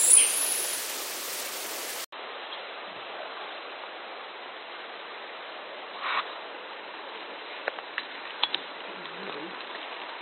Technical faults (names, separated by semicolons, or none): input switched to a poorer device